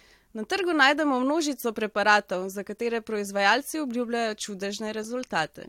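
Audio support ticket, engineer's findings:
Listened through the speech clip and nothing stood out; no findings to log.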